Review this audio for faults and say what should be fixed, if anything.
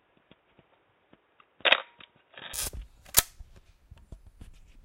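From 0 to 2.54 s the sound is dull and band-limited, with nothing above 3.8 kHz and a faint added noise floor, then clears abruptly; the likely cause is an input switched to a poorer device. Lock the recording input to the intended microphone so the system cannot change devices mid-capture.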